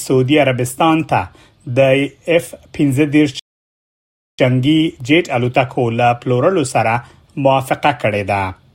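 At 3.39 s a rebuffering stall halts playback into silence until 4.39 s, then the audio resumes where it stopped, adding about 0.99 s.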